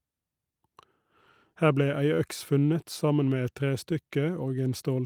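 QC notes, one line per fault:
Throughout: clock drift between sender and receiver. The sender's clock runs roughly 3 percent slow. The receiver's buffer keeps draining, so it must pad the stream. Small timing hiccups recur at uneven intervals. This fits a sender clock lagging the receiver's.
0.22 to 5.01 s: repeated timing corrections. The receiver repeatedly repeats short pieces to keep in step. Playback runs at 98 percent speed, adding roughly 150 ms overall. The edits are uneven but one-directional, heard as faint stutters and a dragging tempo.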